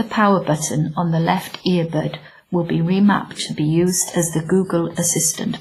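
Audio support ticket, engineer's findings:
Speech, whole clip: ringing, washy tone and hiss that breathes with the voice. Heavy damage, nothing above 15.4 kHz. Likely WMA compression at low bitrate, consistent with 24 kbps. Long transform blocks smear quantisation noise over tens of milliseconds, and weak components are zeroed.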